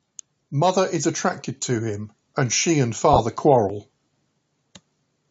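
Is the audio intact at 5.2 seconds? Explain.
Yes, the speech at 5.2 seconds is intact, with nothing wrong at that moment beyond the call microphone processing that normally trims the lowest bass.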